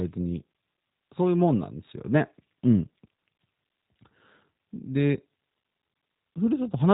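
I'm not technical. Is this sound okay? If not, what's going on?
No. The speech passed through a G.729 phone codec, which discards everything above 3.8 kHz, so the whole clip sounds muffled, rough and slightly synthetic.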